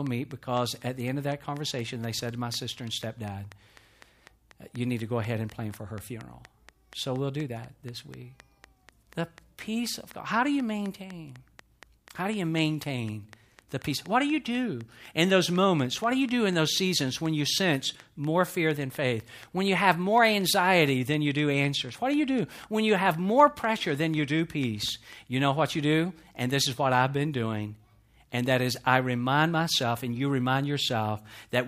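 A speech clip carrying a train of clicks from 0.07 to 25.14 s: about 100 regular ticks at 4.07 per second, roughly 5 dB above the signal, likely interference or a faulty connection or power supply.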